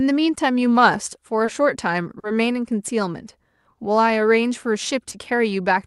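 Brief smears in the speech at 1.45 to 1.49 s, 2.19 to 2.25 s and 5.09 to 5.13 s are short concealed packet loss: 20, 40 and 20 ms of audio arrived too late, and the receiver extended the preceding sound to cover each gap before blending back.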